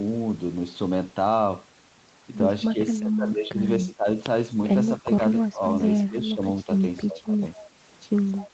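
Speech suppressed in double talk occurs at 2.72 to 4.08 s, 5.0 to 5.62 s, 6.06 to 6.69 s and 7.06 to 7.43 s. The talker's level sinks in short, uneven stretches, roughly 10 dB in the first span and about 15 dB in the later three, so syllables thin out or briefly vanish. This is likely an echo canceller that, with both sides talking, mistook the near talker for loudspeaker echo and attenuated it.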